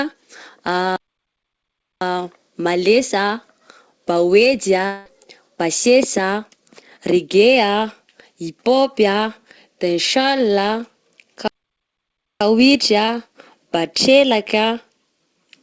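At 0.96 s the speech stops dead. The silence lasts about 1.05 s, until 2.01 s. This is a playback stall. The player likely ran out of data. The speech then resumes where it stopped.

At 4.86 s a long network dropout begins, ending at 5.07 s. About 200 ms of audio likely never arrived. The receiver covers nearly all of it with a buzzy continuation of the last sound. No true silence follows. The speech comes back without the lost part.

A second playback stall runs from 11.48 s to 12.41 s, a gap of about 0.93 s. Its likely cause is again a starved player. The speech carries on from where it halted, still band-limited to 8 kHz by the G.722 call path.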